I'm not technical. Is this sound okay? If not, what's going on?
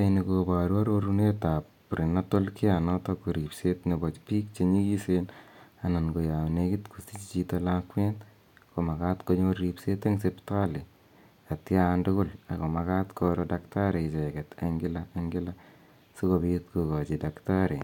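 Yes, the recording is technically sound, with nothing in the signal that a listener would flag as a problem.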